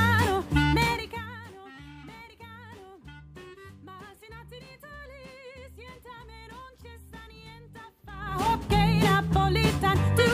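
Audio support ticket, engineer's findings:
Gain change applied in unsmoothed 3 dB steps, about 20 per second, 8.08–8.50 s: zipper noise, a ticking zip riding on a roughly 25 dB level move.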